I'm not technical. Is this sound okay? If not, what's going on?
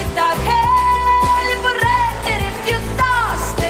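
Yes, this sound is okay. Nothing in it stands out as a technical problem.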